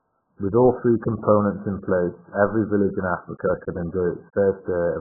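From start to finish the speech is band-limited and heavily damaged, with no content at all above 1.7 kHz. It sounds dull, muffled and smeared, with a watery, warbling texture on sustained sounds. The likely cause is AAC compression at a very low bitrate, around 8 kbps for AAC-LC, where the encoder discards the upper spectrum to save bits. A spectrogram would show a flat ceiling at 1.7 kHz with empty space above it for the whole clip.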